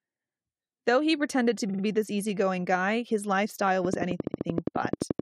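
Compressed frames were written or sent more than once in two places in this speech recording, so the decoder replays the same stretch. From 1.68 to 1.82 s a 46.4 ms block, which fits two frames, plays three extra times, a stutter adding 139 ms. From 4.24 to 4.45 s a 69.7 ms block, consistent with three frames, also repeats three extra times, adding 209 ms. From 3.85 to 5.20 s, likely interference from nearby equipment or a faulty connection or power supply injects a train of clicks, about fifteen near-identical pulses at a regular 11.4 per second, ticking roughly 15 dB above the sound and audible in the gaps too.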